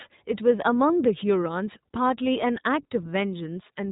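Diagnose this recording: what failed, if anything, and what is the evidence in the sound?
The codec stage is the culprit: the iLBC codec runs throughout, cutting everything above 4 kHz and coding each frame independently, leaving plainly audible roughness consistent with 20 ms frames around 15.2 kbps.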